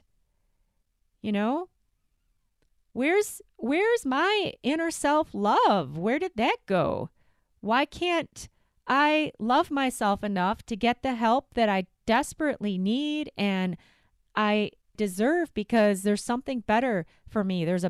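Brief crackles sit on the loudest peaks at 12.11 to 12.16 s and again at 15.76 to 15.87 s, between "need and I deserve" and "there's something". This is hard clipping: the speech overran the signal path's ceiling by about 1 dB, then about 2 dB, squaring off the peaks.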